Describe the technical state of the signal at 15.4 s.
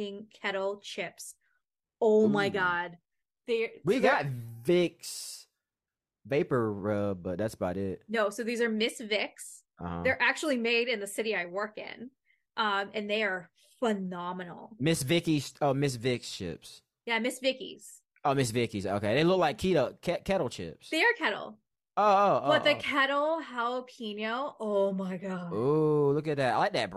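At 15.4 s the speech signal is intact, with no dropout, clipping, glitch or other fault audible at that moment.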